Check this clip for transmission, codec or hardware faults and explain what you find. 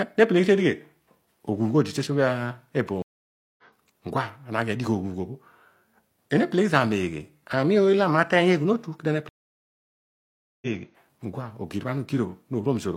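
Two dropouts interrupt the speech, both from a stream reconnect. At 3.02 to 3.63 s the sound cuts to silence for about 0.56 s and resumes roughly 0.7 s further on. At 9.29 to 10.67 s a longer gap of about 1.33 s ends about a second later in the speech. In both cases the connection dropped, the player reconnected, and a fresh decoder picked up the live stream mid-flow, so the missing speech is skipped and the audio fades back in.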